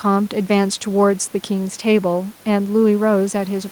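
No technical faults are audible.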